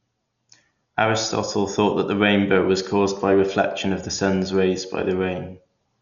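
Throughout, the speech sounds dull, with rough, fluttering noise around tones, likely from heavy Dolby Digital compression near 48 kbps. A spectrogram shows nothing above 7.1 kHz.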